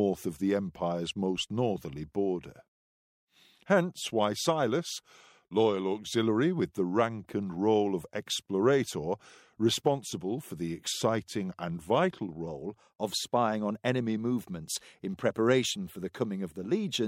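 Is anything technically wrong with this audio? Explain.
Yes. From 0.0 to 12.47 s there is a wrong sample rate fault: the samples are clocked out slower than they were captured, which fits 48 kHz material played at 44.1 kHz. The sound runs at 0.919 times speed and sits 1.47 semitones low, slowed and darkened together.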